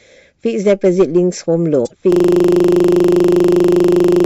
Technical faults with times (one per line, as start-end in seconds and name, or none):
1.82-1.92 damaged data in a compressed stream
2.12-4.26 system hang loop